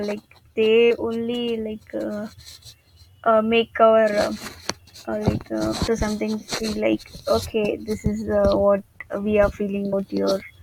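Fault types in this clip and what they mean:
Damaged data in a compressed stream: Part of the encoded speech stream is corrupt, so the decoder misreads those frames and loses sync until it finds a valid frame header again. Here it shows as four very brief glitches, at about 0.9, 3.26, 5.87 and 9.92 seconds. Each lasts under 20 ms. They are isolated glitches spread across the clip, not a continuous defect.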